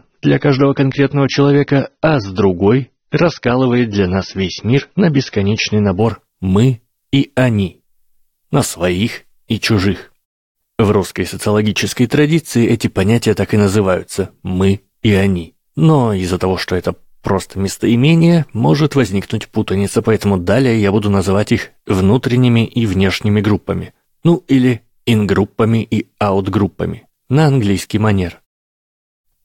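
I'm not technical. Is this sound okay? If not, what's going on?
No. For the first 6 seconds, the speech sounds dull and smeary, with no sound above 6.3 kHz. Then, just before "мы и они", it suddenly turns clear. This is an adaptive stream starting at a low bitrate. The player began with a low-quality version and switched once it had checked the connection.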